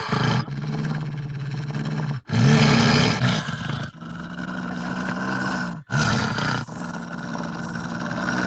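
Nothing goes wrong here; the sound just has the typical call-audio character, with the low rumble trimmed by the microphone's high-pass filter and nothing above about 8 kHz, which fits a wideband Opus call at around 32 kbps.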